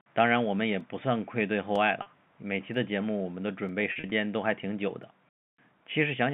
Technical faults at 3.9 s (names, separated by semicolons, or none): packet loss with pitch repetition